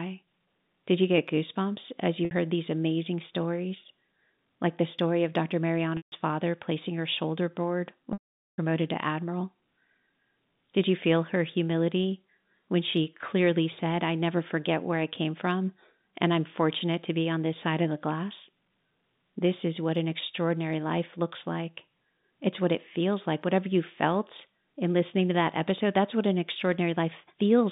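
Packet loss with pitch repetition breaks the speech three times. At 2.25 s, after "you get goosebumps as", a 60 ms gap is bridged by repeating the last pitch period, giving a brief held buzz. At 5.97 s, before "father placing her shoulder", 150 ms is lost and the repeated cycle fades out. At 8.13 s, after "placing her shoulder board", 450 ms goes missing. The repetition decays into silence, and "to admiral" returns with a short cross-fade over the narrow telephone band.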